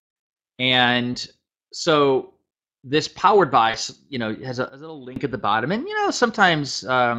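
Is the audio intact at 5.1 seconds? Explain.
No. From 4.69 to 5.16 s there is a sudden gain jump: the digital gain was likely switched from one sample to the next without any ramp. Sound and background noise drop together by about 17 dB, then return abruptly.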